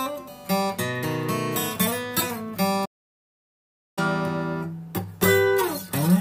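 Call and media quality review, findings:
Playback stall, 2.85 s to 3.99 s: sound cuts out mid-flow and stays silent for about 1.1 s before picking back up. Probable component is the player side, likely a buffer underrun or its output thread getting blocked.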